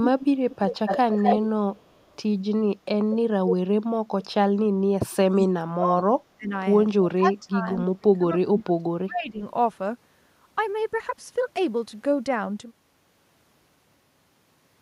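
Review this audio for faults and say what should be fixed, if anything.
Echo leak appears at 0.04–0.26 s, 0.5–1.39 s, 1.76–2.16 s and 3.48–3.54 s. A delayed copy of the speech returns about 330 ms late at first, then about 240 ms late. It is nearly as loud as the direct speech, except near 2 s, where it is about 35 dB down. This is likely the far end's loudspeaker feeding its microphone past an incompletely converged echo canceller. Using a headset or retuning that end's canceller would prevent it.

Speech suppressed in double talk occurs at 5.33–6.04 s, 6.36–6.53 s, 7.14–7.67 s and 7.85–9.42 s. The talker drops by about 20 to 35 dB in chopped pieces, with the longest loss lasting over a second. The likely cause is the canceller failing to separate near speech from echo and attenuating both. Better double-talk detection would prevent this.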